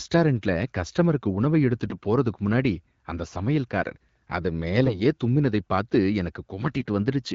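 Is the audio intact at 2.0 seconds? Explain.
No. AMR bit errors hit from 1.90 to 2.06 s, just after "கஸ்டமருக்கு உணவை" and before "போறதுக்கு முன்னாடி". The call runs over AMR-WB at 12.65 kbit/s, and in this stretch flipped bits in the weakly protected parts of each frame, at a rate of around 7 percent, misplace the excitation pulses and skew the fine pitch, gain and spectral values. The span fits several consecutive 20 ms frames, which come out hoarse, scratchy and gargly.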